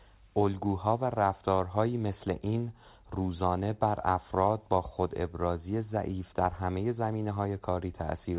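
No technical faults are present in this speech clip, which has passed through a WebRTC call path whose nothing-above-4 kHz bandwidth and coding noise are consistent with narrowband G.711 mu-law telephony at 64 kbps.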